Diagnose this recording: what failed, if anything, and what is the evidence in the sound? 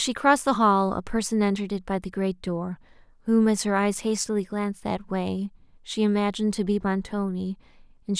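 Nothing failed in this recording, and the sound carries no evidence of a fault at any stage.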